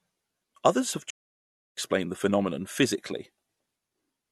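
At 1.10 s the speech cuts to silence mid-flow for about 0.67 s, until 1.77 s, then continues. This is a playback stall, likely caused by the player running out of buffered data or its output thread being blocked.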